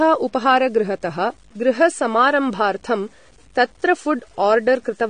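From start to finish the speech carries grainy distortion that tracks its level, likely low bit depth without dither: the sound fits 8-bit truncation, with error roughly 35 dB below the signal. On a waveform, quiet passages show visible stair-steps rather than smooth curves.

Throughout, the speech also sounds dull, smeared and fizzy on sibilants, which points to AAC compression, likely AAC-LC at around 32 kbps. A spectrogram shows nothing above 9.7 kHz, a hard ceiling.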